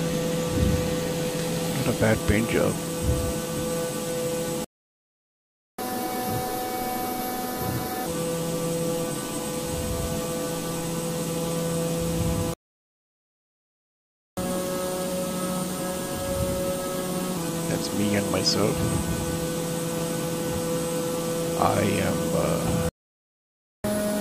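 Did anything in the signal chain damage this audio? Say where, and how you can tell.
Yes. At the playback stage the player likely ran short of data or had its thread blocked, causing three playback stalls. The sound cuts to silence from 4.64 to 5.79 s, 12.54 to 14.37 s and 22.89 to 23.84 s, then resumes.

Each stall is followed by catch-up at higher speed. The player resamples its backlog faster to win back lost time, raising speed and pitch together. It runs 1.5 times faster from 5.79 to 8.06 s (roughly seven semitones up), 1.1 times from 14.37 to 17.37 s (about a semitone and a half), and 1.25 times from 23.84 s to the end (about four semitones).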